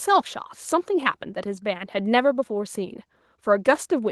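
Listening to the speech, nothing stood out as a technical problem.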